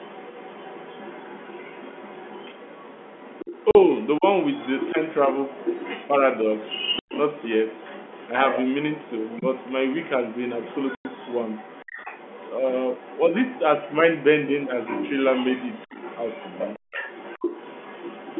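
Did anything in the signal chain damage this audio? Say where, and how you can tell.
Yes. A second, fainter speech track runs under the talker from the start to 4.07 s at about 20 dB down, from 4.42 to 5.09 s at about 10 dB down, and from 5.42 s to the end at about 15 dB down. This is the other side's voice leaking through, likely residual loudspeaker echo left by the call's echo canceller.

The speech is cut by hard-edged holes at 3.71 s (40 ms), 6.99 s (90 ms) and 10.95 s (100 ms). This is packet loss filled with silence on the network leg. The gaps are whole multiples of 10 ms, which fits 10 ms packets replaced by silence.

From 4.18 to 4.25 s the talker's level dips by roughly 10 dB for about 70 ms. This is speech suppressed in double talk, in the call processing. The likely cause is the echo canceller attenuating both voices when it couldn't separate them.

At 16.79 s the room sound drops by about 40 dB for roughly 100 ms, then returns. 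This is the background gated by the echo canceller: while the loudspeaker played, the canceller clamped the microphone hard and then released it.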